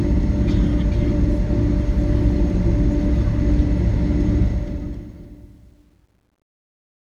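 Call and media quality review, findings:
Fade gain stage truncating to 10 bits without dither: truncation distortion on the fade-out, 4.44 to 7.16 s. Tail turns gritty, worst from 5.3 s.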